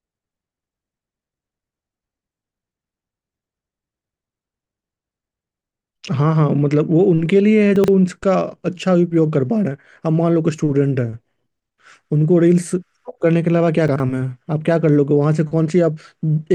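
At 7.76 to 7.88 s and again at 13.88 to 14.0 s, the speech stumbles with chunks out of order. A 40 ms block plays two blocks late. Nothing is lost, but the sequence scrambles. Three hard joins give a jumbled moment.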